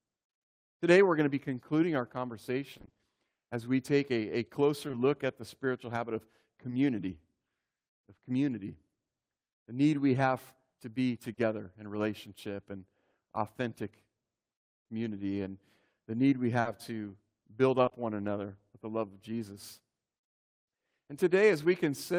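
Speech with dropped network packets. In repeated packet loss (robotic sound) from 2.73 to 3.01 s, just before "as we take a", seven gaps of up to 20 ms each were patched by extending prior audio, leaving half that stretch synthetic, choppy and robotic. Short concealed packet loss, where 20 to 40 ms failed to arrive and was filled in, leaves brief smears or wobbles at 4.87 to 4.95 s, at 6.69 s after "the spiritual habit of", at 11.33 to 11.39 s between "we have to be" and "in relationship and authentic", at 16.61 to 16.67 s, and at 17.85 to 17.93 s.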